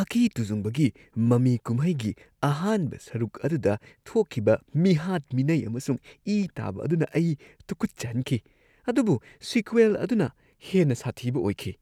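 No technical faults can be heard anywhere in this recording.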